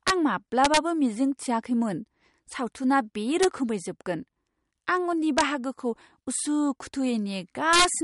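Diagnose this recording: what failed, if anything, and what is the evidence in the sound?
Throughout the speech there is watery, swirly smearing, and nothing is present above 11.2 kHz. This is likely MP3 compression at the codec stage. Weak frequency lines flicker in and out between frames, which points to a low bitrate. Unlike a plain low-pass filter, the damage is spectral and shifts over time.

Integer overflow cracks sit at 0.08–0.10 s, 0.65–0.77 s (just before "मिजिं थिआखैमोन सावथुना बे"), 3.43 s (just after those words), 5.38–5.41 s and 7.73–7.85 s. These come from the sample-format or gain stage: the peaks wrap to the opposite sign instead of flattening, so they sound sharper than clipping.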